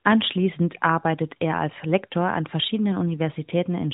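No technical faults can be heard in the speech, which carries the band-limited sound of the AMR narrowband mobile codec working as intended, with nothing above 4 kHz and only light coding roughness that fits its higher 12.2 kbps mode.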